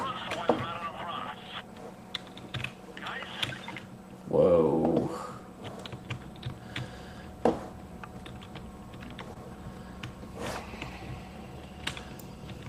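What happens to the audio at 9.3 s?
At about 9.33 to 9.37 s there is a short concealed packet loss: roughly 20 ms of audio failed to reach the decoder in time. The receiver covered about 18 ms of the gap by extending the preceding sound, either carrying its pitch forward or generating shaped noise, and then crossfaded back into the real signal at 9.37 s. The result is a brief smear or wobble where the original sound is replaced by a synthetic continuation.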